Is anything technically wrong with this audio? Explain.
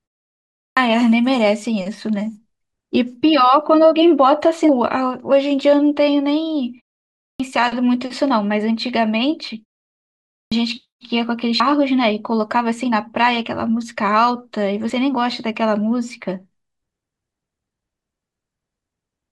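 Yes, there are two faults.

Clipped start after a pause at 0.57 s, 7.18 s and 10.31 s: the output device sleeps through silences of 0.57, 0.45 and 0.74 s and wakes late. The sound then begins abruptly, missing its first 197, 216 and 206 ms.

Compressed frames skipped at 4.69 s, 11.60 s and 14.90 s: whole coded frames, apparently 32 ms each, are dropped. The audio jumps ahead by roughly 200, 150 and 30 ms, consistent with about seven, five and one lost frames.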